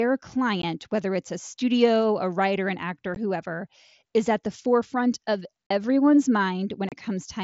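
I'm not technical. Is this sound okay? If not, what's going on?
No. The speech briefly cuts out four times, with abrupt edges: at 0.62 s before "whether it's a studio", at 3.15 s, from 5.67 to 5.71 s, and from 6.89 to 6.92 s. This is unconcealed Bluetooth headset packet loss. Tiny pieces of sound, 15 to 37.5 ms each, never arrived from the headset, and nothing filled the gaps.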